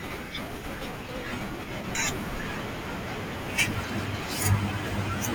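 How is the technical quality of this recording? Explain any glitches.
The speech recording has four abrupt skips at 0.88, 1.95, 2.83 and 3.81 s, each a jump forward. These are likely dropped buffers (overrun), losing roughly 50, 100, 100 and 150 ms.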